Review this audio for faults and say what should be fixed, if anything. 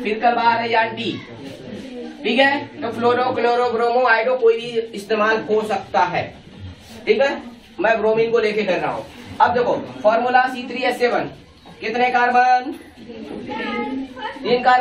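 Nothing here needs to be fixed, as the review turns up no faults in the audio.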